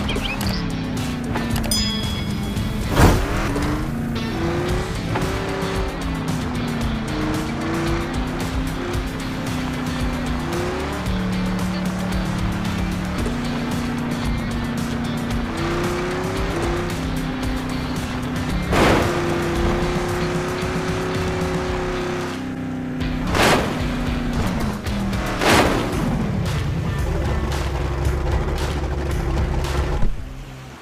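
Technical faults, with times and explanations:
Nothing stood out as a technical fault on listening.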